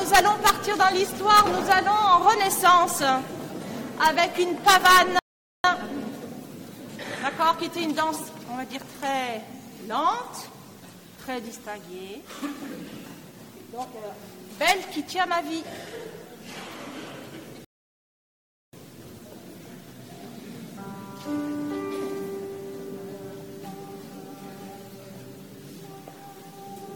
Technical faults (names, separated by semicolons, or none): rebuffering stall